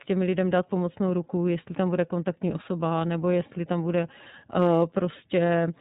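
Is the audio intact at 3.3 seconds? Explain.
No. At 3.3 seconds the whole clip passes through the iLBC codec, coding each 30 ms frame independently at what sounds like its 13.33 kbps mode, cutting everything above 4 kHz and leaving the speech audibly rough and synthetic.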